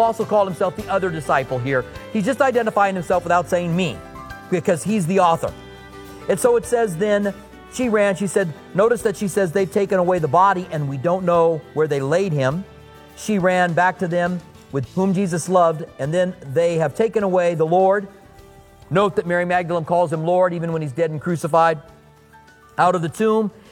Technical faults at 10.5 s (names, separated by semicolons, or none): none